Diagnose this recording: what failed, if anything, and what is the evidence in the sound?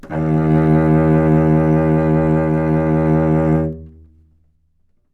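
A gain change in the processing chain was applied in coarse 2 dB increments with no interpolation between them, producing zipper noise from 3.48 to 4.6 s. As the level falls by roughly 10 dB, each jump puts a small discontinuity into the waveform. At around seven steps per second, these discontinuities form an audible ticking that rides on the sound until the level settles.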